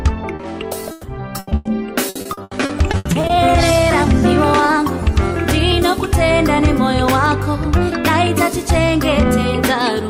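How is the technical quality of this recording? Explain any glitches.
The technical quality suffers from network dropouts in the first few seconds.

Right at the start, around 0.35 to 0.45 s, there's short concealed packet loss: two back-to-back holes of 40 ms and 20 ms. The receiver papered over them by extending the preceding sound, so you get a quick smear or wobble there.

Then it gets rougher with repeated packet loss, a robotic sound, from 0.91 to 1.67 s and again from 2.09 to 3.31 s. The gaps come one after another, up to 120 ms long, and nearly half of the first stretch is filled in. Each patch continues the last sound, so it goes choppy, with pieces missing.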